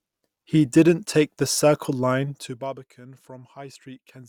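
Nothing in the speech stood out as a technical problem on listening.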